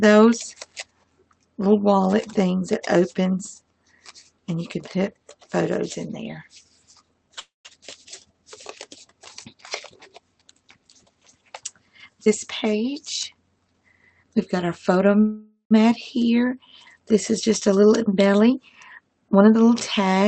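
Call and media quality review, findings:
Call audio freeze, 7.39–7.67 s and 15.20–15.73 s: likely delayed packets draining the jitter buffer. Last sound stretched into a fading buzz or hiss, then silence; playback resumes where it stopped, adding 0.25 s and 0.5 s of delay.

Jitter buffer speed-up, 11.99–14.97 s and 17.68–20.24 s: receiver trimming excess buffered audio by cutting pitch-period slices. Runs 8% then 7% fast at unchanged pitch and sounds hurried, shedding about 0.3 s and 0.2 s. Call path band-limited to about 8 kHz, fitting a low-bitrate Opus setting.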